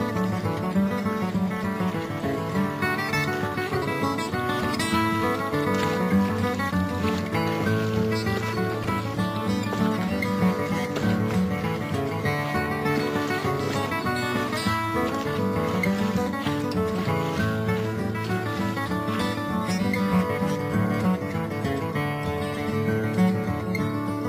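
At 8.84 s there is a repeated buffer: fresh audio failed to reach the output in time, so the device replayed its last block of roughly 2.9 ms, which fits a 128-sample buffer, three extra times. The piece is so short that it is heard as a brief buzz or click rather than a stutter. About 10 ms of audio is lost. The waveform shows one tiny segment copied end to end with abrupt joins, and a spectrogram shows a thin vertical stripe with harmonics near 345 Hz.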